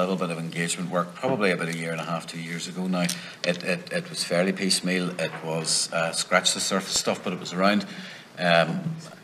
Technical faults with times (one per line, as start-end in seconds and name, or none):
6.96-8.39 CD scratch ticks